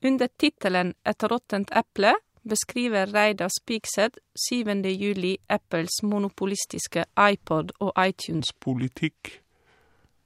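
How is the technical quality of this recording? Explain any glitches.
The recording has one clear glitch, near the end.

Section at the wrong speed, from 8.40 s to 10.25 s: the last stretch of speech plays at 0.77 times its recorded speed, likely because that part was rendered against the wrong clock. Slowing the playback stretches the waveform, so pitch drops along with tempo, by roughly five semitones here. The voice abruptly turns deeper and more drawn out, sounding sluggish and heavy until the clip ends.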